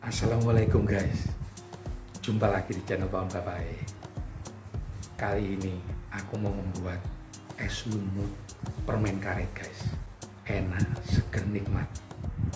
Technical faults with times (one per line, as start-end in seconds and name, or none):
none